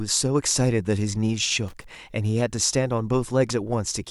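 At 1.68 s there's a short burst of loose connector crackle, lasting about a quarter second to 1.92 s. A worn or dirty contact is making and breaking, chopping the speech and popping as any DC jumps, so you hear ragged scratchy crackle.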